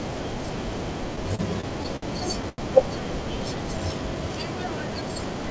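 From 1.16 to 2.04 s the speech shows repeated stalls, a stutter. Packets kept arriving late, so the jitter buffer ran dry five times. Each time, the receiver held on to the last sound until fresh audio came. Together the gaps add up to 144 ms of filled sound, about 16 percent of that stretch. The longest is 59 ms. Nothing is lost. The speech drags and catches in small jerks.

At 2.49 s a short stall from a late packet follows. One packet missed its slot, and its delay jumped by 89 ms. The buffer emptied again. The receiver stretched the last sound for 89 ms, then resumed from the same point at 2.60 s. No speech is dropped. One sound is simply held too long, with a faint buzz. Throughout, the G.722 call path leaves nothing above 8 kHz.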